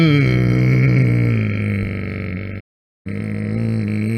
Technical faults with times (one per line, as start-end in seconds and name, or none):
2.59-3.07 digital broadcast dropout